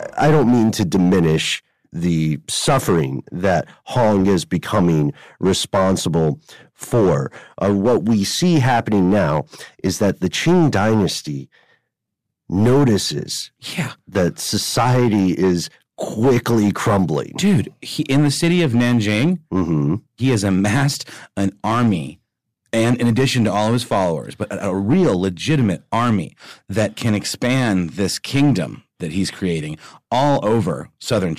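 Throughout the speech, a stage in the chain is driven about 6 dB beyond what it can pass, so hard clipping cuts the loudest peaks flat, a small share of all samples. Those squared-off tops add high harmonics, heard as crackle on the peaks.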